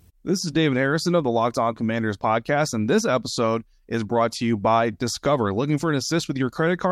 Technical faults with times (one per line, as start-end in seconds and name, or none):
none